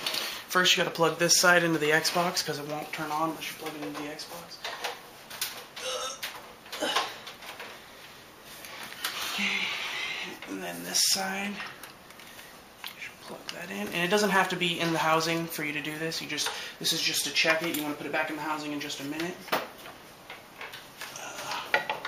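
Sharp single clicks at 0.80 s and 17.03 s are likely dropped samples: under half a millisecond goes missing, so the waveform jumps abruptly.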